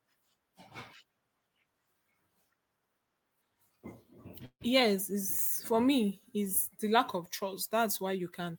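At 4.45 to 4.63 s the speech halts in a call audio freeze, likely from delayed packets emptying the jitter buffer. The last sound smears into a fading buzz ending in about 70 ms of silence: flat horizontal bands on a spectrogram, then blank. Speech resumes intact, 152 ms late.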